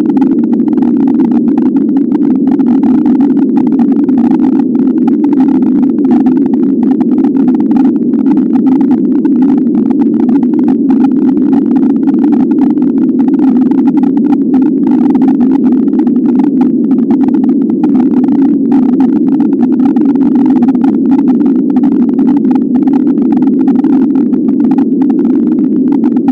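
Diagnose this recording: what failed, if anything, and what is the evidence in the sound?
Hard clipping runs through the whole recording, somewhere at a converter or format stage that couldn't pass the level. The signal was driven about 8 dB past its ceiling, so roughly a tenth of the samples got squared off, adding distortion on every loud moment.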